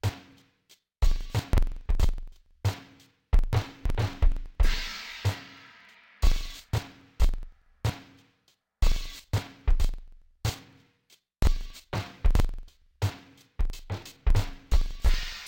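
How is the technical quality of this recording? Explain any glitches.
The recording is badly damaged. Interleaved audio read as planar runs throughout the music. Each block, about 46 ms long, fits a 2048-sample buffer. Its halves play as separate channels at half speed. The music sounds an octave low, doubled and choppy, stuttering about 21.5 times a second.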